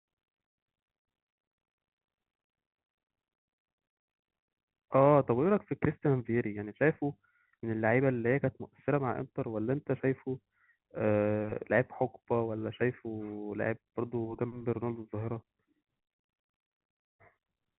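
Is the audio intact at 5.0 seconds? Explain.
Yes, the audio is intact at 5.0 seconds, with no fault at that moment.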